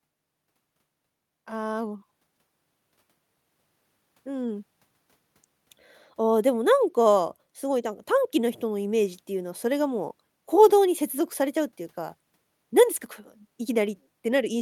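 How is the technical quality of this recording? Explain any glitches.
One glitch runs through most of the recording. Automatic gain rising, 1.47 to 13.88 s: the gain control judged the input too quiet and slowly raised it about 5 dB, so speech and background swell together.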